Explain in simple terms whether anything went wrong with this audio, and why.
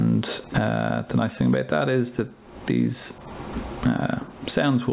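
Gain pumping runs through the whole clip. Loud and soft moments end up closer in volume, which makes the sound feel squashed. This is most likely because the microphone level was set far too high and an automatic limiter keeps reining it in. Unlike a noise gate, which cuts the background to silence between sounds, pumping makes the background grow louder in the pauses. The narrow, telephone-like tone with nothing above 4 kHz comes from the call connection.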